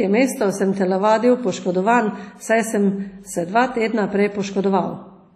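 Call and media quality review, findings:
Likely WMA compression, heavy, throughout the speech: low-bitrate transform coding, consistent with roughly 32 kbps, coarsely quantising long blocks and zeroing weak spectral lines. Ringing, washy smear around the speech, hiss breathing with level, no content above 13.7 kHz.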